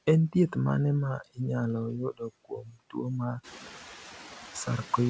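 A speech recording with a residue of noise in the background that dips between phrases and swells under them. These are noise suppressor artifacts: the suppressor pulls down the bands it judges to be steady noise by about 5 dB, frame by frame, so the leftover noise pumps instead of sitting still. From 2.45 to 2.94 s, just after "mane ma inyalo yudo", parts of the speech turn faint and swallowed, falling by as much as about 12 dB for around a fifth of a second in total. This is speech cut by the noise suppressor: it mistook those soft stretches for background and turned them down along with the noise. The room noise grows by about 13 dB from around 3.5 s and still sits about 16 dB below the speech. Nothing is present above 8 kHz, which fits the G.722 call codec at 64 kbps.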